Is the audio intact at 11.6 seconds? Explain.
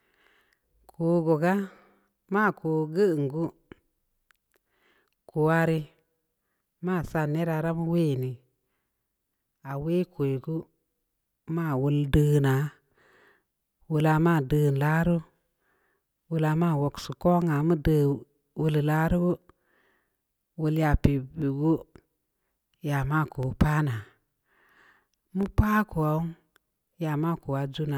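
Yes, at 11.6 seconds the speech plays through cleanly, with no dropout, click, distortion or other fault to be heard at that point.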